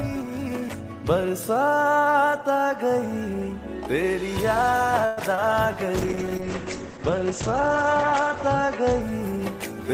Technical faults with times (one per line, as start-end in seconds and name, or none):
5.05-5.19 call audio freeze
5.35-5.39 short concealed packet loss
5.97-9.07 call bitrate drop